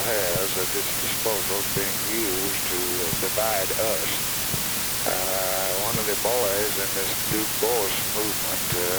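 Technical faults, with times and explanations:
Throughout: low bit depth with dither. The sound is carried by just 3 bits, so each sample is rounded to one of very few levels. Random dither added before rounding turns that error into a steady, even white hiss sitting about 5 dB above the sound itself. Plain truncation without dither would instead give gritty distortion that follows the signal and vanishes in quiet moments. Here the hiss stays constant and the sound stays free of distortion.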